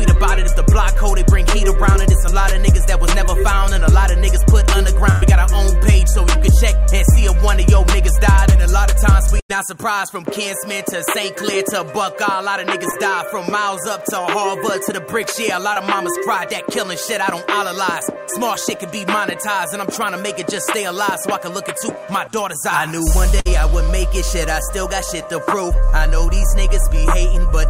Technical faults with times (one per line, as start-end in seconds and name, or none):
5.11-5.24 burst of packet loss
9.40-9.51 burst of packet loss
12.91-12.94 short concealed packet loss
15.73-15.78 short concealed packet loss
23.40-23.47 burst of packet loss